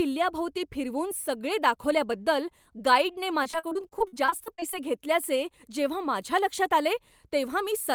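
From 3.43 to 4.75 s, after "दाखवल्याबद्दल गाईडने" and before "घेतल्याचे जेव्हा", the speech breaks up with repeated packet loss. Many short holes, none longer than 40 ms, are patched by stretching the last sound. About a quarter of this span is concealed, so the speech turns choppy, with pieces missing.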